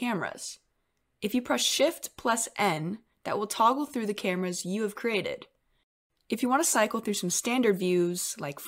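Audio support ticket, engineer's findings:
Listened through the speech clip and found nothing to flag, so no fault to log on this one.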